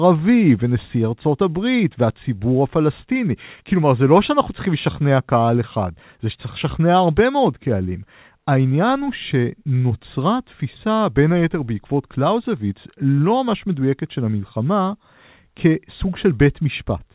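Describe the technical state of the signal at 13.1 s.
At 13.1 s the speech is intact, carried through the call path with its narrowband G.711 A-law coding and nothing above 4 kHz.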